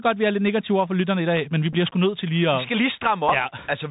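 Throughout, the speech sounds muffled and scratchy over a granular hiss, with nothing above 4 kHz: the Bluetooth CVSD headset codec, whose one-bit delta coding fits a 64 kbps link. At 1.73 s, between "i dag men vi" and "sgu nødt til lige", and again at 3.29 s after "skal lige", a brief buzz marks a Bluetooth headset packet repeated, about 7.5 ms of sound rebuilt from the previous packet's bits.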